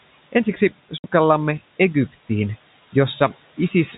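Speech runs through a noise suppressor throughout. It cuts the steady background by about 14 dB, so the noise dips between words and rises underneath them. At 0.98 s there is packet loss filled with silence. A 60 ms hole, hard-edged, runs to 1.04 s. Its length fits three lost 20 ms packets. The room noise sits about 19 dB under the speech, and the 4 kHz ceiling of G.711 telephone coding can be heard.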